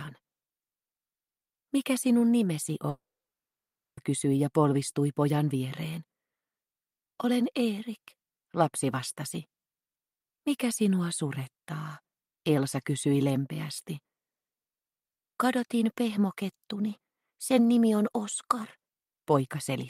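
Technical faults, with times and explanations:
2.89 to 4.00 s, long network dropout: packets likely stopped arriving; a brief fading buzz gives way to nearly a second of silence, and 1.08 s never returns.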